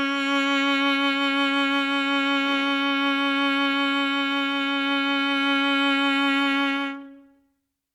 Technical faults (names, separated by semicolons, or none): none